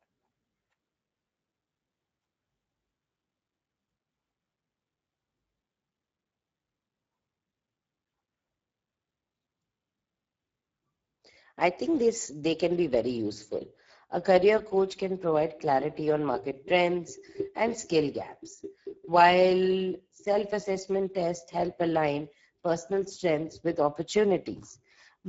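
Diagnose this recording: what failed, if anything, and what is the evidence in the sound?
Speex codec damage throughout the speech, at the codec stage: hoarse, noisy CELP excitation fitting a low setting near 10 kbps, and nothing above 7.6 kHz.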